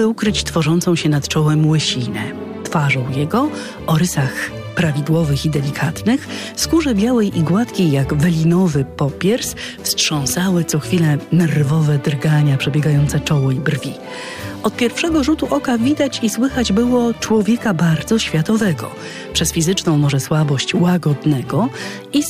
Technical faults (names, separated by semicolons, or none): none